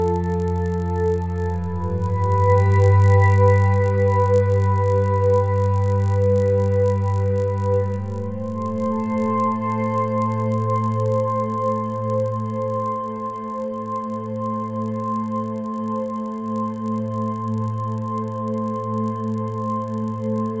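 The resampler restarted on every block, so each 20 ms block was converted on its own, consistent with a 44.1 kHz to 16 kHz conversion, leaving a 50 Hz buzz wherever there is signal.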